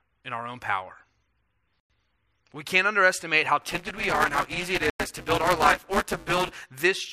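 Gap between chunks, 1.80 to 1.90 s: a hard-edged 100 ms silence at the join between chunks of speech. The sound pauses at the join but nothing is missing.

Buffer tearing, 3.62 to 6.61 s: writer and reader of the ring buffer have slipped out of step. About a third of each buffer replays audio from roughly 10 ms earlier, giving a rattling 188 Hz buzz over the speech, which fits a 256-sample buffer.

Gap between chunks, 4.90 to 5.00 s: another 100 ms hole with abrupt edges, falling inside the torn stretch, about 3 s after the first gap.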